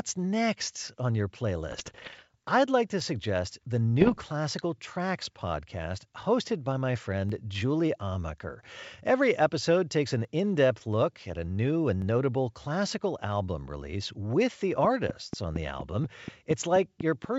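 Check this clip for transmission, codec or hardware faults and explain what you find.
Two kinds of fault are present: bursts of bit errors on the ADPCM link carrying the wideband G.722 audio, and four isolated clicks from dropped samples.

Bit errors on an ADPCM link occur from 1.71 to 2.23 s and again from 4.00 to 4.23 s, right after "like to suggest the". Roughly one bit in a hundred was corrupted in the first burst, and about 1.5 in a hundred in the second. Because an ADPCM decoder adapts its step size and prediction from past codes, each flipped bit throws it off course for several milliseconds, not just one sample. The result is pops, gritty rough bursts and brief jumps in level.

Dropped samples produce single sharp clicks at 3.00, 7.30, 10.25 and 12.02 s. The one at 10.25 s falls between "episode takes an" and "in depth look at", and the one at 12.02 s between "look at a new" and "notable classical album release". 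A fraction of a millisecond of samples has likely gone missing each time, so the waveform leaps straight to a later value. That gap is too short to remove any sound, but the step shows as a thin vertical line across the spectrum.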